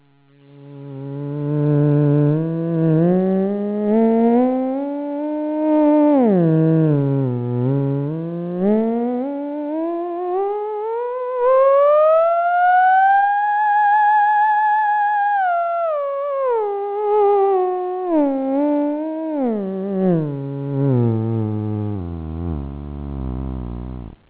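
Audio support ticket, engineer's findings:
Nothing wrong turned up on this one; the audio comes through a normal call path, and the content stopping at about 4 kHz is just the narrowband ceiling, which fits a G.711-style telephone codec.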